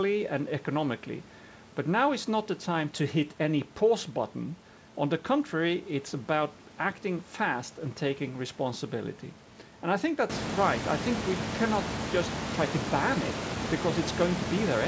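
Speech recording with no audible technical faults.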